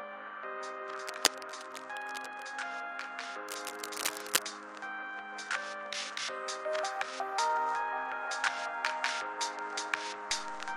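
A recording of sounds with cable scratch noise from 0.94 to 2.44 s and again from 3.48 to 4.43 s: dense, uneven rustling at about the level of the sound itself, likely from a worn cable or connector being moved, unlike steady hiss because it starts and stops in bursts. At 10.31 s a DC step shifts the waveform's zero line by about -46 dBFS and holds to the end, heard as a low thump or click, with the sound continuing unchanged.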